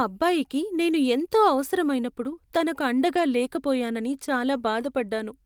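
From 3.15 to 3.21 s, just after "నేను ఎంతో అవసరమైనప్పుడు తనకు", the speech turns briefly rougher and noisier. This is a lost packet rebuilt from error correction: about 40 ms, consistent with two 20 ms packets, was played from low-bitrate backup copies, so no gap is heard.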